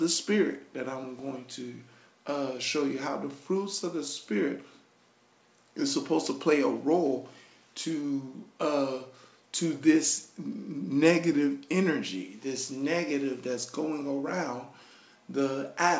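Nothing to flag here, as the audio sounds like it came over an ordinary wideband call link, with content stopping at about 8 kHz the way a G.722-style codec leaves it and no glitches anywhere along the way.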